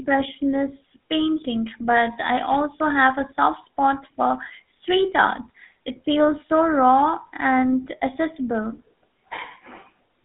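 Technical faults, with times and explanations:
Throughout, GSM full-rate codec: the speech is held to a band of about 200 Hz to 3.6 kHz and has a plainly audible buzzy, gravelly roughness. The codec rebuilds the voice from a vocal-tract model driven by sparse, regularly spaced pulses, which fits a 13 kbps full-rate stream.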